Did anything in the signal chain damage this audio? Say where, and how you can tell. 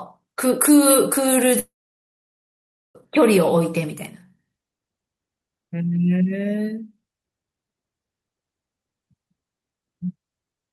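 Yes. At the network stage, there is a long network dropout, likely a run of lost packets, from about 1.59 s to 2.98 s. The receiver's concealment stretches the last sound into a fading buzz, and after about a tenth of a second it leaves about 1.26 s of near-silence. Speech then resumes with about 1.36 s of material simply gone. The audio arrives through an Opus call path at 48 kbps, band-limited to 12 kHz.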